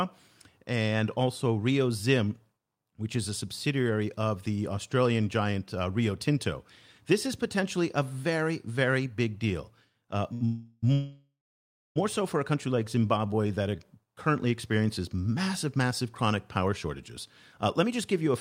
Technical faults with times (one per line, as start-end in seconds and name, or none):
10.33-10.43 short stall from a late packet
10.45-11.98 call audio freeze
12.68-14.02 jitter buffer slow-down
17.83-18.29 jitter buffer speed-up